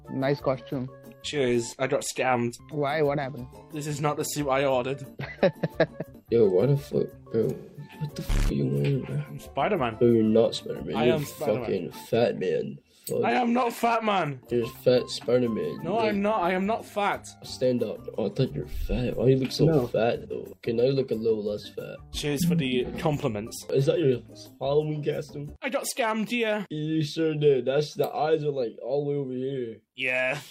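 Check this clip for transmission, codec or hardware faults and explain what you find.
Two patches of AAC frame loss with concealment are audible. From 7.56 to 7.93 s, about 0.36 s of audio, covering five lost frames or about 213 ms of lost audio, turns smeared and phasey as the decoder rebuilds it from the last good spectrum. At 20.19 to 20.26 s a shorter gap of about 43 ms, consistent with a single frame, sounds like a brief noisy blur. Unlike a plain dropout, neither gap goes silent. Both are filled with a smeared copy of the preceding sound.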